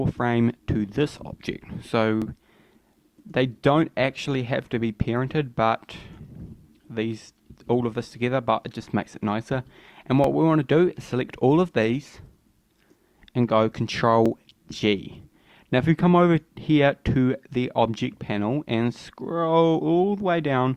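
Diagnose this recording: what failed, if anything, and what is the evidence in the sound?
Overlapping chunks, buffer stage. Short stutters at 2.22, 6.23, 10.24, 14.26 and 18.27 s, every 4.0 s. Each chunk starts early, replaying 13 ms.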